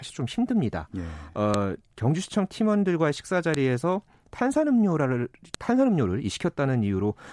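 At 1.54 s, 3.54 s and 5.54 s the speech is broken by a sharp, loud click, the file header played as audio. These land exactly 2.0 s apart, which points to separate WAV pieces being joined with their header bytes left in and decoded as samples. On a waveform each shows as a single sharp spike unrelated to the surrounding speech envelope; on a spectrogram, a thin vertical line spanning all frequencies.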